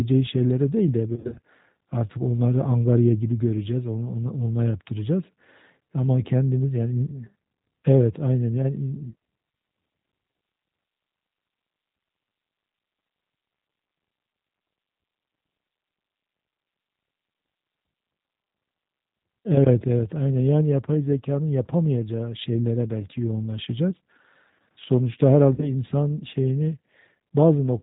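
Throughout, the G.729 codec is plainly audible. The speech is rebuilt from a vocal-tract model and sparse pulses at 8 kbit/s, so it sounds rough and synthetic with nothing above 4 kHz. Unlike simple low-pass filtering, the damage is a rough, modelled texture.

From 1.16 to 1.39 s, VoIP packet loss concealed by the speech codec stretches the speech into brief buzzy tones or coloured noise that fade. About 120 ms is lost in runs of up to 40 ms. A plain dropout would leave silence or clicks instead. The same happens more briefly from 25.54 to 25.72 s, where about 40 ms is lost.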